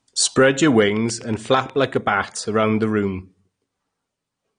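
The whole speech track is dull and smeared, with a watery, fizzy edge on sibilants. Nothing sounds above 9.7 kHz. This is likely AAC compression at a low bitrate, and the damage is plain enough to fit about 32 kbps. The coder dropped the top band and starved the rest.

From 0.97 to 1.95 s, a train of clicks ticks over the speech. There are about ten of them, evenly spaced at 8.2 per second. Each peaks at roughly the level of the speech itself. The likely cause is interference or a faulty connection injecting pulses.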